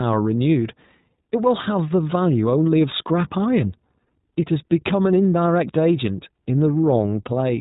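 iLBC codec damage runs through the whole speech clip, plainly audible from start to finish. Each short frame, on the order of 20 ms, has its excitation coded on its own rather than predicted from the one before, so the speech comes out clear but slightly rough and synthetic. The band stops at about 3.8 kHz, taking away the air and sibilant detail, and the overall character fits a narrowband VoIP link at around 15 kbps.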